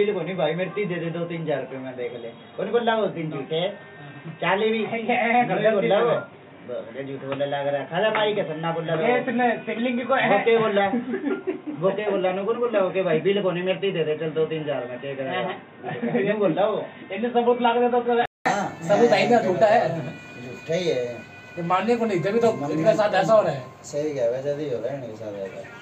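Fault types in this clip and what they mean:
Input switched to a poorer device: From the start until 18.46 s the sound is dull and boxy, with nothing above 3.8 kHz, a background noise roughly 30 dB below the signal, and a level about 5 dB lower; then a 200 ms silence and the full band returns. The likely cause is a change of input device, not a plain filter or codec limit, because tone, level and noise floor all change together at one switch point.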